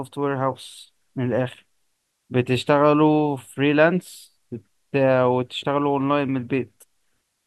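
Nothing in the speech recording points to a technical fault at any moment.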